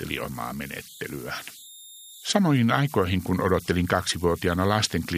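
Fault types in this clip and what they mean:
Converter idle tones: an undithered delta-sigma converter falls into repeating bit patterns at low levels, adding a whistle near 4 kHz, about 22 dB below the speech.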